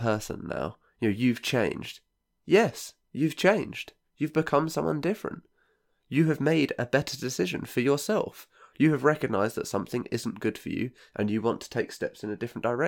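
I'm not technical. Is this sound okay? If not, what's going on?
Yes, nothing wrong can be heard in this recording.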